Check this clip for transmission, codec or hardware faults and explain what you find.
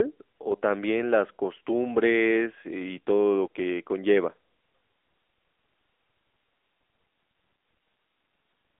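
There's one fault, running the whole way through: the AMR narrowband mobile codec. The speech is squeezed into a phone band of roughly 300 Hz to 3.5 kHz, with nothing above 3.8 kHz. The codec models the vocal tract and drives it with sparse pulses, and here that's plainly audible as a buzzy, synthetic edge, which fits a mid-rate mode around 10.2 kbps.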